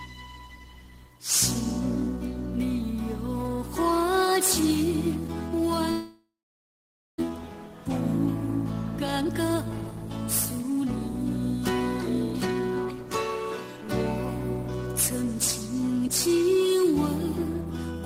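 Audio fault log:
5.91–7.22 s, long network dropout: Audio likely stopped arriving at the receiver for over a second. The receiver continued the last sound as a fading buzz for a moment, then held about 0.87 s of silence before the sound returned. Roughly a second of the original audio never plays, so the sound picks up mid-stream with a gap. The playout delay afterwards is around a third of a second different.
9.02–9.56 s and 15.22–16.28 s, jitter buffer speed-up: The jitter buffer held more audio than its target, so the receiver cut many short pitch-period-length slices to reduce the backlog. The first stretch runs at 118% speed and loses about a tenth of a second, sounding clearly rushed at unchanged pitch. The second runs at 105% and drops around 50 ms, a milder hurrying.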